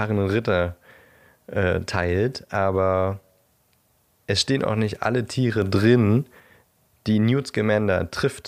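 At 5.62 s the speech and its background noise jump up together by about 4 dB. The raised level holds until 6.4 s, then drops back. This is a sudden gain jump. The likely cause is a gain change applied without a ramp.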